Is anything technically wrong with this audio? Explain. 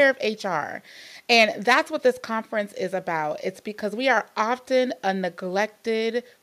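No, nothing technically wrong can be heard here.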